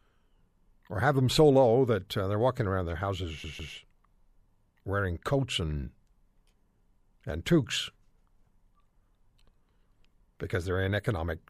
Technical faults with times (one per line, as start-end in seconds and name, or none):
3.44-3.74 CD stuck on one turn